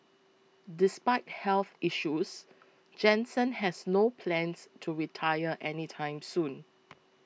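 Nothing in this bit of speech stands out as a technical fault at any point, so there's nothing here to flag.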